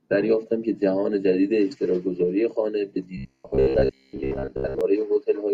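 A speech recording, with robotic sound from repeated short buffers from 3.17 s to 4.81 s. Across that stretch the voice becomes a rigid, metallic buzz at a fixed pitch of about 67 Hz, while still loosely tracking the speech. Most of that span is repeated material rather than fresh audio. The likely cause is new audio arriving too slowly, so playback loops the last fragment. The buzz pitch fits a fragment roughly 15 ms long.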